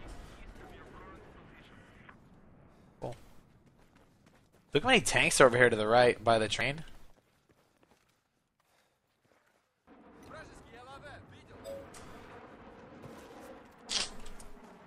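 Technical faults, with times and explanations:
6.61 s, damaged data in a compressed stream: a brief blip lasting only a few milliseconds. Corrupted bytes in the encoded stream stop the decoder from reading a frame correctly, so it misreads or drops that frame and then resynchronises at the next intact frame header.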